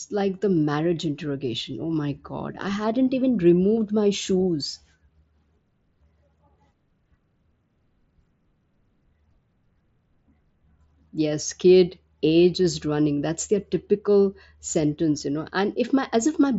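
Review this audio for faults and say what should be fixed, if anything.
Nothing needs fixing: the speech comes over a wideband Bluetooth headset link using the mSBC codec, and its content stops at about 7.7 kHz, as that link allows, with no faults present.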